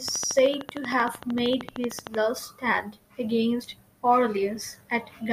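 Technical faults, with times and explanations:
0.08–2.16 s, train of clicks: a steady ticking of around thirty near-identical pulses, evenly spaced at 13.1 per second and peaking roughly 10 dB above the speech, ending just before "stand against"; likely interference from nearby equipment or a faulty connection or power supply.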